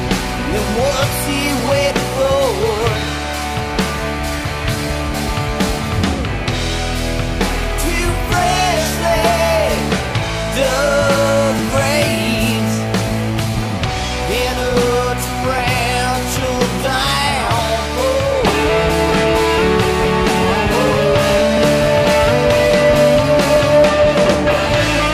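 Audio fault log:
1.60 to 23.56 s, periodic USB or driver dropouts: about ten small ticks, spaced exactly every 2.0 s across this span, each where a couple of milliseconds of audio vanish. At each one, something holds up the USB bus or audio driver on a fixed schedule, and the stalled chunk is skipped outright rather than padded with silence. The waveform jumps straight to later material, and that abrupt join is heard as a regular click that shows up only where sound is present.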